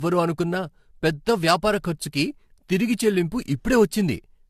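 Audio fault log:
throughout generation loss: the speech was likely re-encoded about four times, the sound pointing to AAC near 64 kbit/s. Each pass requantises on a shifted frame grid, so noise and spectral holes pile up, leaving it swirly, hollow and smeared, with blurred attacks and nothing above 14.4 kHz.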